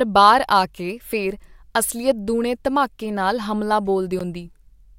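A block of digital silence at 4.19 s interrupts this speech clip just after "ਦੂਣੇ ਧਮਾਕੇ ਨਾਲ ਹਮਲਾ". For about 12 ms the signal drops to silence and then resumes, with no fade on either side. The waveform jumps abruptly to silence and back, creating a sharp edge at each boundary. Because the gap is so short, it is heard as a tick or dip rather than an audible hole in the sound.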